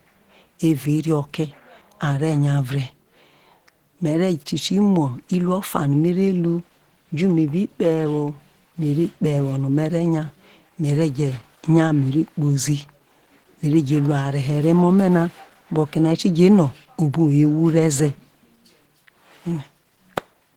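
The encoder was likely starved of bits throughout, with Opus compression forced into its hybrid speech mode, a setting that points to a rate around 16 kbps. Content reaches up to about 20.2 kHz, so the top end isn't cut away. Instead, the coarse coding of each band leaves the speech plainly hoarse and grainy from start to finish, with a rough, noisy texture where detail has been approximated rather than kept.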